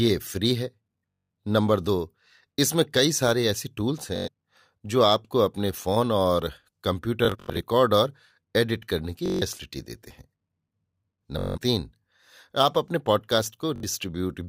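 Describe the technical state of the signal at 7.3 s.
At 7.3 s the signal is inside a Bluetooth stutter running from 7.25 to 7.61 s. Packets arrived late or not at all, and the receiver kept replaying its last short slice of audio. That produces a rapid machine-gun buzz rather than silence. The gaps add up to about 192 ms spread over 341 ms, consistent with around nine lost frames, with the longest burst about 85 ms. The speech then resumes further along, as if it had played on. A plain dropout would go silent instead of repeating.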